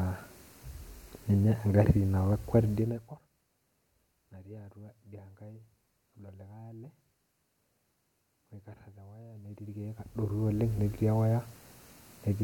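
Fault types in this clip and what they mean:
No technical faults can be heard anywhere in this speech signal.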